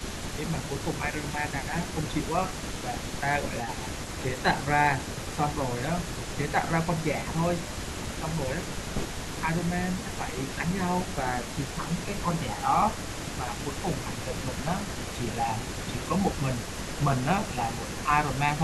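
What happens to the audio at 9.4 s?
At 9.4 s you're inside a stretch of speech suppressed in double talk, running from 8.2 to 10.62 s. The talker's level sags in short patches, never deeper than roughly 5 dB and adding up to about a third of a second across that window. It sounds like the voice briefly ducking back. The likely cause is an echo canceller hearing both sides at once, failing to tell its own talker from the loudspeaker return, and pulling everything down.

Under that, the echo leak runs through the whole clip, 0.0 to 18.62 s, so it's present at 9.4 s too. There's a faint second copy of the speech trailing about 412 ms behind, sitting well below the main voice, somewhere around 20 dB down. That's likely a loudspeaker on one side whose canceller let part of its mic pickup slip through and sent it back down the line.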